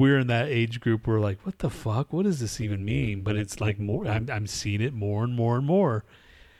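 From 2.61 to 4.24 s, overlap-add ripple: badly overlapped frames swing about 11 dB near 200 Hz, a buzzy robotic flutter faster than ordinary tremolo.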